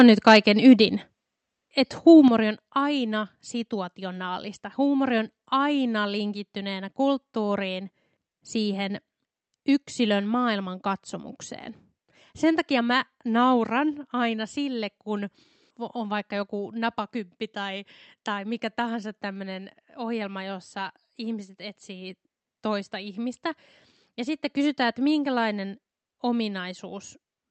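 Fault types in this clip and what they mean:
Microphone volume stepped down: the speech level drops abruptly in two single steps, about 5 dB at 1.02 s and about 8 dB at 2.28 s, just before "on aina situationaalista". The likely cause is call software cutting the device's input gain after judging it too hot.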